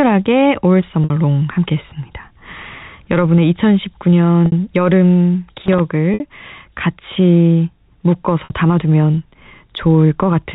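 Packet loss with pitch repetition occurs at 1.04, 4.46, 6.14 and 8.44 s, each gap about 60 ms, which fits three 20 ms packets. The receiver filled each hole by repeating the last pitch period and fading it, so the speech briefly holds on a slightly buzzy, frozen tone.

Loose connector crackle runs from 5.59 to 5.80 s. A worn or dirty contact was rapidly making and breaking, chopping the signal. It comes through as an irregular scratchy burst over the narrow G.711 telephone band.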